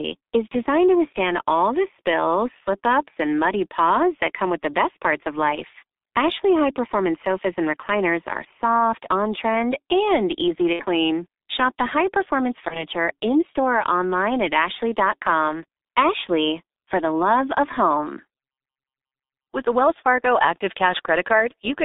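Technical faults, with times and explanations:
Throughout: G.723.1 codec. The speech passes through a low-rate telephony coder running near 6.3 kbit/s with a line band of roughly 250 Hz to 3.7 kHz, and the damage is heavy. Its slow 30 ms frame updates leave the voice muffled and hoarse, with smeared consonants.
10.73 to 10.84 s: VoIP packet loss concealed by the speech codec. Right after "trend and easy to", about 60 ms of audio went missing, which fits two lost 30 ms frames. The decoder rebuilt the gap from its last pitch and filter at falling gain, so the sound stretches into a fading buzz or coloured noise and stays weak for a moment after packets resume.
12.68 to 12.85 s: VoIP packet loss concealed by the speech codec. Between "high performance" and "in store or online", about 30 ms was lost, which fits a single dropped frame. The decoder again extrapolated the previous frame and faded it, giving a brief smear of buzz or coloured noise, and the recovering frames keep the voice thin and distorted for tens of milliseconds.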